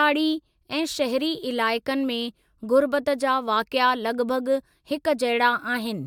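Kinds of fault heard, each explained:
Nothing stood out on listening to this speech recording.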